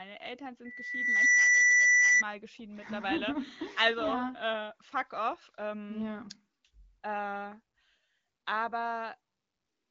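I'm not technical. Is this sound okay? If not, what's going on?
No. From 0.64 to 2.23 s there is a loudspeaker feedback squeal: a microphone is picking up the speaker it feeds, so one pitch, here 2 kHz, keeps looping and growing. Unlike a steady beep or electrical hum, it swells from nothing over roughly the first 0.7 seconds into a piercing whistle that ends up much louder than the speech. The phone-call (HD Voice) quality of the recording doesn't cause this.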